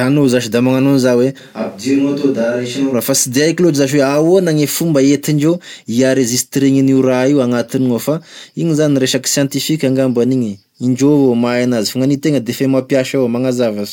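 From 1.41 s to 2.92 s the speech suddenly turns roomy and hollow, loses its low end, drops a few decibels in level, and sits over more audible room noise, roughly 35 dB below the speech. It snaps back just as abruptly. This is most likely a switch to a distant microphone. Unlike a simple level dip or an added reverb, the tone, distance, ambience and noise floor all change together at hard edges.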